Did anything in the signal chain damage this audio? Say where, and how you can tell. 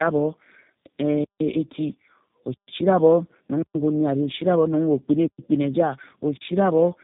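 Yes. Throughout, the speech sounds rough, muffled and warbly, with nothing above 3.8 kHz. This is tandem speech coding: AMR-NB then G.729A, the second recoding the first's damage.

From 6.37 to 6.41 s, a 40 ms block of digital silence cuts in. The driver or buffer stage likely missed filling output in time.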